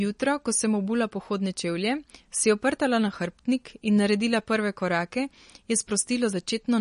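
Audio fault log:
Throughout: MP3 compression, likely cause of the plainly audible damage. Nothing is heard above 10.6 kHz, and the speech takes on a watery, swirly quality as weak frequency lines drop in and out between frames, consistent with a low bitrate near 40 kbps.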